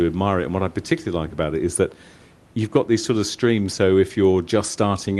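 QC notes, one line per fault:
No faults heard in this clip.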